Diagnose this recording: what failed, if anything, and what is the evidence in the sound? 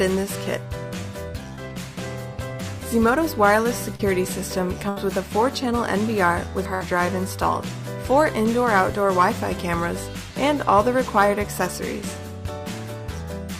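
Short concealed packet loss at 1.55–1.59 s and 3.95–4.01 s, a network failure. About 20 ms and then 40 ms of audio arrived too late or never, and the decoder bridged each hole by extending the preceding sound. The result is a brief smear or wobble before the real signal blends back in.

Burst of packet loss at 4.89–4.98 s and 6.74–6.83 s, also in the network path. Consecutive packets totalling about 80 ms and then 60 ms went missing. The receiver stretched the last sound into a fading buzz or hiss, then resumed further along, skipping the lost portion.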